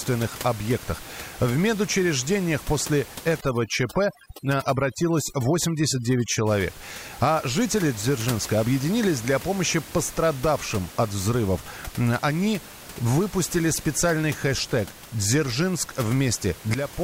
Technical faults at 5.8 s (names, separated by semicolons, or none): overdone noise removal